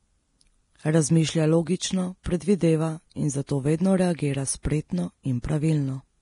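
The whole clip has a grainy, hissy top end with nothing above 10.6 kHz, which is likely heavy Vorbis compression at a low bitrate, something around 31 kbps. The treble detail has been quantised into noise, so the speech sounds roughened and its consonant attacks are blurred.

Pre-echo then shows up four times, at 2.23 to 2.26 s, 3.47 to 3.49 s, 4.16 to 4.19 s and 4.63 to 4.65 s. Each time a short hiss of about 22 to 28 ms leaks in just before a sharp onset. That's the block's quantisation noise spilling into the quiet moment ahead of the attack, which also softens the attack.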